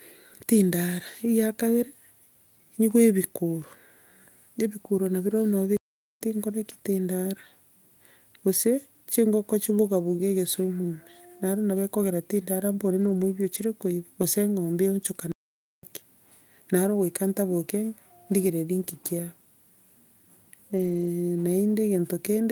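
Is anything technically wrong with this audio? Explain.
Yes, there are two kinds of trouble in this speech clip.

There's a playback stall at 5.77 to 6.21 s and another at 15.32 to 15.83 s. The speech just cuts to silence for about half a second each time, then carries on. That's likely the player starving for data or its thread getting blocked.

Then there are lost packets rebuilt from error correction, at 9.85 s and across 13.01 to 13.23 s and 20.77 to 21.07 s. There are no gaps, because the decoder filled in from low-bitrate backup copies carried in the following packets. But those stretches, about 120 ms and 160 ms of rebuilt audio in the longer two, come out noticeably rougher and noisier.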